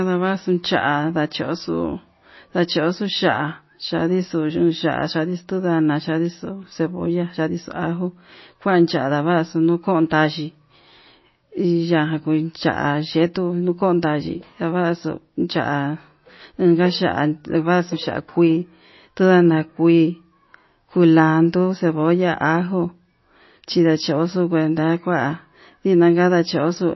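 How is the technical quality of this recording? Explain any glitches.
The recording has one fault, present throughout: MP3 compression, likely a heavy encode. Treble stops abruptly at about 5.8 kHz, and the remaining speech sounds watery and swirly, with chirpy, metallic s sounds and smeared consonant attacks. That points to a very low bitrate, around 24 kbps. Starved of bits, the encoder discards the top band and drops weaker frequency lines, which flicker on and off between frames. That flicker is what separates it from a simple low-pass filter, which would sound dull but steady.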